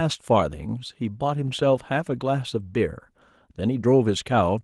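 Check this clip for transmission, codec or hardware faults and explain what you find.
No transmission or hardware faults.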